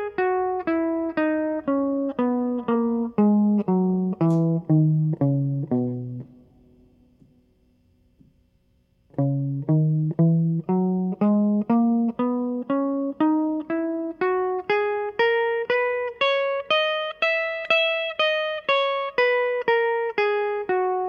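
Listening to this music, nothing stood out as a technical fault at any point.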